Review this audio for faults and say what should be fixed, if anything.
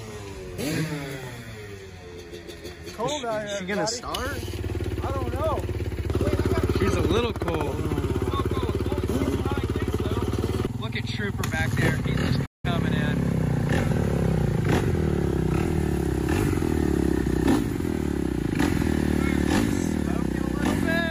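A playback stall at 12.45–12.65 s cuts the sound to silence for about 180 ms before it resumes, likely from the player's buffer running dry or its thread blocking. Prevent it with a larger playback buffer and a dedicated, higher-priority audio thread.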